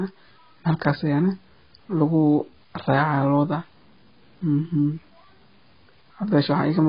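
From start to finish the speech carries a gritty, grainy distortion that clings to the signal, roughening quiet passages and settling around 35 dB below the speech. This is the sound of low bit depth without dither. The likely cause is samples cut down to a coarse grid by plain truncation, with no added noise to break up the error. The error therefore tracks the waveform, and the level of it fits 9-bit truncation.

Across the whole clip the speech is also dull and smeared, with nothing above 5.5 kHz and a warbling, fizzy texture on sustained sounds and sibilants. This heavy damage points to AAC compression, likely AAC-LC at around 16 kbps. At that rate the encoder lowers its cut-off and quantises the frequency lines coarsely against its hearing model, so the top of the spectrum is missing and detail in the remaining bands goes unstable and blurred.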